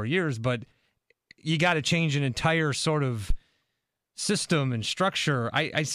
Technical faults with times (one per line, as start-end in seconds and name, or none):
3.30-3.36 phantom power thump